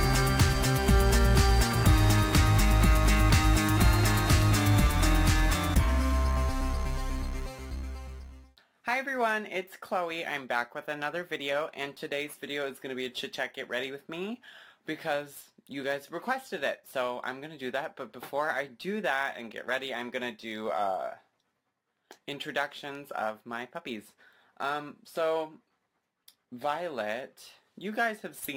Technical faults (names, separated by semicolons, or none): crude rate conversion